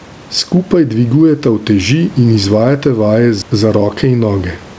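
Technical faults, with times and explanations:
Throughout, gain pumping: the gain swings by around 10 dB, leaving loud and quiet parts squashed close together. This is likely caused by excessive microphone gain being held down by a fast limiter or compressor.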